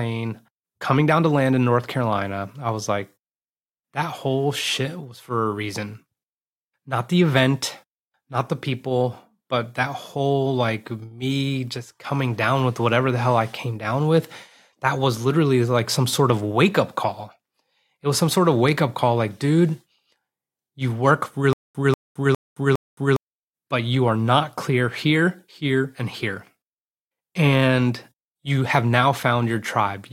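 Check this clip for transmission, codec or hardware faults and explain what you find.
One fault stands out, a stutter with silent gaps from 21.53 to 23.16 s. A short burst of the speech, about 191 ms long, plays four times in a row, each repeat followed by roughly 218 ms of dead digital silence, so the same fragment pulses at a steady 409 ms rhythm. The likely cause is a stalled player or stream that replays its last buffered fragment on each retry and then runs dry, so the speech that belonged in that stretch never arrives.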